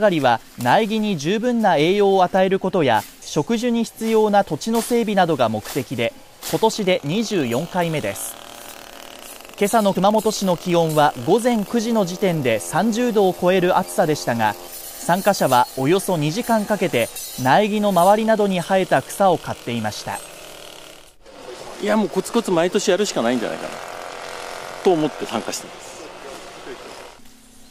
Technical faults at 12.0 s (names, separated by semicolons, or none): none